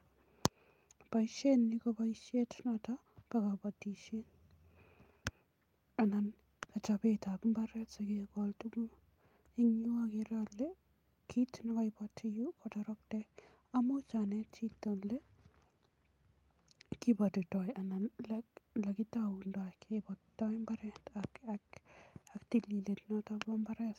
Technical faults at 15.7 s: none

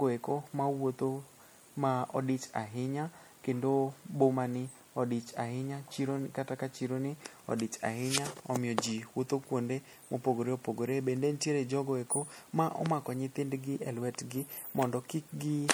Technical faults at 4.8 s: MP3 compression

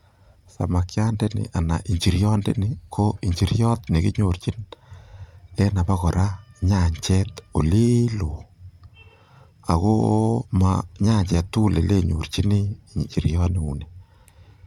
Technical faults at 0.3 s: none

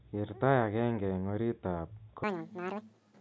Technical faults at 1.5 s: none

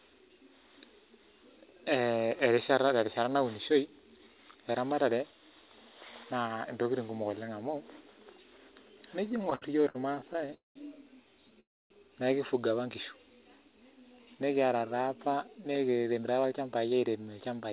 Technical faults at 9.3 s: repeated stalls (stutter)

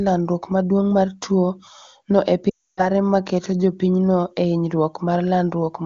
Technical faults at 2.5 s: lost AMR speech frames

